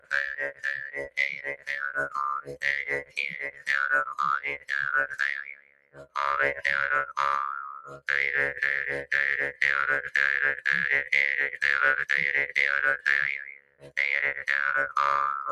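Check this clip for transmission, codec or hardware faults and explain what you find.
Two faults are present: a speech-tuned noise suppressor left running on non-speech audio, which shows up as pumping, plus several deeper dips where it cut sound.

Noise suppressor applied to music or sounds, throughout. A denoiser built for voice treats steady tones, ambience and decay as noise. Gain swings by around 15 dB, so transients get through while sustained material and tails are pulled down, giving a pumping, thinned sound.

Sound cut by the noise suppressor, at 0.0–1.97, 2.41–2.65, 2.82–3.69, 4.38–4.72, 5.07–6.17, 7.82–8.08 and 13.37–13.98 s. In these spans the suppressor judged the held or fading sound to be noise and attenuated it by about 17 to 20 dB, so the level sinks and decays end abruptly.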